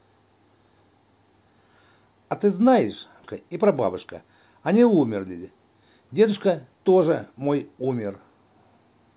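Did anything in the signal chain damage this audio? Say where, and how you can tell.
Yes. At the network and jitter-buffer stage there is a skip ahead at 3.24 s: roughly three quarters of a second of speech never reached playback, and the receiver joined the audio on either side of the gap with no fill. You can tell because the speech jumps abruptly mid-flow, with no silence or smoothing at the join. The dropped stretch also cut the playout delay by about the same amount, since audio that had been queued behind it played immediately.

Right after that jump, from 3.34 to 4.22 s, the jitter buffer speed-up begins. The buffer was holding more audio than its target, so the receiver trimmed short pitch-period-length pieces over and over, about 70 ms in total, to reduce the delay. Speech in that window runs at about 108% of its normal rate but keeps its pitch, so it sounds slightly rushed. Above it all sits the G.711 A-law call codec's band limit, with nothing above 4 kHz.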